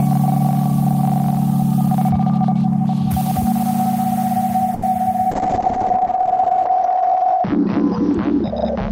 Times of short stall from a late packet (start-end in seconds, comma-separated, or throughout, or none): 4.74-4.83